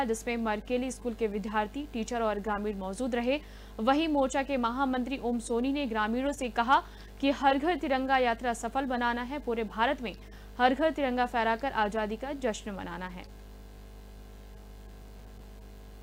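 Near the end, from 15.01 s to 15.44 s, a burst of processor overload crackle breaks into the audio. The processing could not finish its short buffers on time, and about ten deadlines were missed over that stretch, which fits buffers of around 10 ms. Each miss replays a fragment of old audio with hard edges, so the sound takes on a gritty, tearing crackle for a little under half a second. It clears once the load drops.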